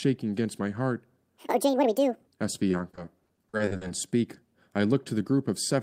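From 1.38 s to 2.27 s a section at the wrong speed plays 1.85 times too fast, likely from resampling against the wrong clock. The speech turns hurried and chipmunk-like, roughly ten semitones high; a spectrogram shows harmonics stacked further apart and syllables squeezed horizontally.

Between 2.71 s and 3.91 s, repeated packet loss produces choppy, robotic speech. Short holes, none longer than 40 ms, are filled by extending the preceding sound, covering about 28% of the stretch. The waveform shows repeated, flattened cycles, and the spectrogram shows smeared, striped blocks.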